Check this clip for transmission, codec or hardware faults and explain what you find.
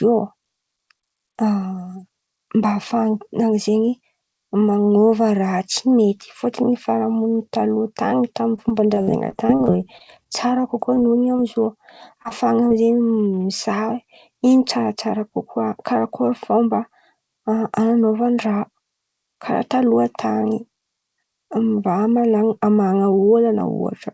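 Two kinds of packet loss are audible. The audio carries nothing above 8 kHz, which fits a G.722 call codec at 64 kbps.

Repeated packet loss (robotic sound) runs from 8.56 to 10.98 s. Packets kept arriving lost or late. Each gap was patched by extending the previous sound, about 11% of the stretch in all, with the longest gap 49 ms. The speech turns choppy.

Short concealed packet loss occurs at 12.22–12.26 s, 12.28–12.32 s and 12.68–12.72 s. Each time, about 20 ms failed to arrive. The receiver continued the last sound and blended back in. Each one is heard as a brief smear or wobble.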